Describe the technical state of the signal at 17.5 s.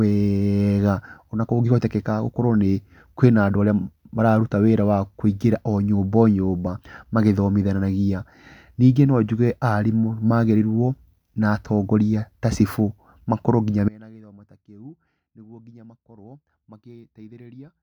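At 17.5 s the speech is gone, leaving only a faint residue of sound roughly 25 dB below its normal level. This is an audio dropout to a faint residue that began abruptly at 13.89 s, right after "ta cibũ makorwo nginya", and runs to the end of the clip. The sudden cut, unlike a natural pause or fade, is likely a break in the wanted signal while the path downstream stayed live and passed only this faint residue.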